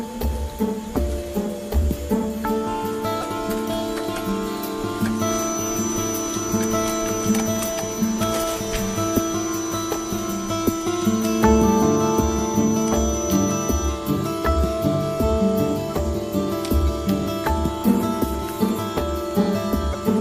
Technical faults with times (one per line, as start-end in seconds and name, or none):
3.20-3.23 broken MP3 bit reservoir
5.11-14.02 feedback whistle
19.92-19.95 broken MP3 bit reservoir